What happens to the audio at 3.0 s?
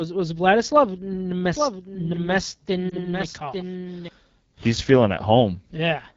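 Between 2.90 and 3.03 s there are lost AMR speech frames: a brief dip or warble, which fits a single lost 20 ms frame. The decoder reuses the last good pitch and vocal tract settings at falling gain rather than cutting to a hard gap, and the speech then returns weak or rough for a moment. This plays over the raspy AMR wideband (HD Voice) coding at 8.85 kbit/s, which runs through the whole clip.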